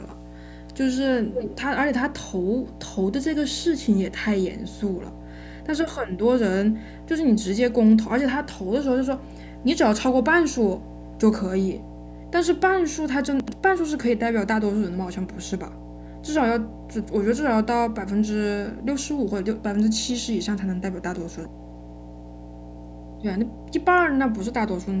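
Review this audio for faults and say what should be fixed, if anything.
A ground loop or a nearby transformer is feeding the 60 Hz power line into the signal path, producing mains hum for the full length of the recording. It sits as a steady low tone with some low harmonics, strong enough to be clearly audible at roughly 10 dB below the speech, so it muddies the bottom end throughout. To prevent it, break the ground loop with a balanced connection or isolation transformer and move the cabling away from power supplies.

The far end was most likely playing the call on a loudspeaker while its echo canceller let part of that playback back into its microphone, producing echo leak. From 1.34 to 1.57 s, a delayed copy of the speech arrives 224 ms behind the original at nearly the same loudness as the speech itself. From 21.3 to 22.01 s, the same 224 ms echo returns, very faint this time. To prevent it, use a headset on the far end or improve its echo cancellation.

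Between 13.4 and 13.52 s, a 40 ms chunk of audio arrived or was written two chunks late, producing chunks out of order. Nothing is missing, but that piece plays after the two chunks that should follow it, so the moment sounds jumbled, with three hard joins. To prevent it, reorder chunks by sequence number in the buffer before playback or writing.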